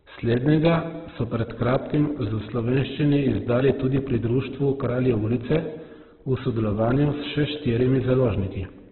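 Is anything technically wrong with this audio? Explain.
Yes. The whole clip carries heavy Opus compression damage, likely from a very starved stream; the sound fits something around 8 kbps. Nothing comes through above about 4.2 kHz, so the speech sounds boxed in and phone-like. At that rate the codec's music mode keeps each band's overall energy but fills in the fine detail with folded or noise-like content. The voice comes out grainy and rough rather than swirly.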